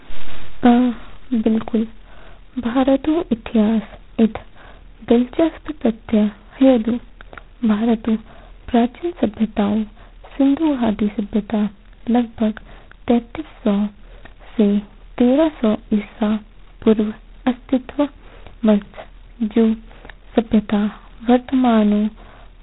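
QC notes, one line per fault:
Throughout: G.726 ADPCM at 16 kbit/s, heavy damage; coarse two-bit difference coding leaves a rasping hiss tracking speech level, spectrogram bands empty above 3.9 kHz.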